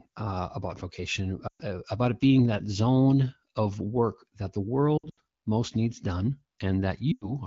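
Lost AMR speech frames occur at 1.48–1.61 s, just before "about it being that"; at 4.97–5.20 s, between "of work that the" and "most needs done", where 140 ms of losses are scattered with runs of up to 80 ms; and at 7.11–7.34 s. Frames that failed their radio checksum were replaced by the decoder, which repeated the last pitch and vocal tract settings at falling gain. Rather than a hard gap or click, the sound drops to near silence within two frames, then returns thin and rough. All of this plays over AMR-WB coding whose clarity fits a rate of around 12.65 kbit/s.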